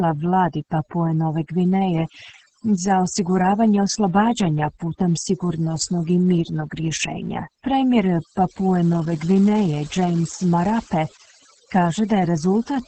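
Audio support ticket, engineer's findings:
Overdone noise removal, full length of the speech clip. Background pulled down, with twinkling specks in the gaps. Quieter parts of the voice missing. Denoiser set too strong: bands near its noise estimate are cut hard or gated off, taking low-level speech energy with them.

Opus voice compression, full length. Speech muffled, hoarse, slightly robotic. Nothing above about 8.9 kHz, which points to SILK in wideband mode. Heavy coding damage, which fits a bitrate of roughly 10 kbps: excitation coded coarsely, so the voice loses detail and texture.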